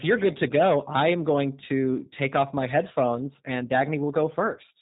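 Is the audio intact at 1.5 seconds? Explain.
No. At 1.5 seconds, as across the whole recording, the speech has passed through the G.729 codec. Rather than storing the waveform, the coder keeps only a vocal tract filter, a pitch predictor and a handful of pulses per 10 ms frame, and discards everything above 4 kHz. The result is plainly audible: the speech sounds muffled, slightly rough and synthetic, which fits a low-rate coder running at about 8 kbit/s.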